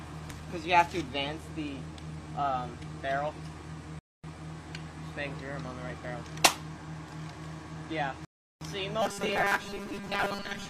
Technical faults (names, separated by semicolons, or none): rebuffering stall; robotic sound from repeated short buffers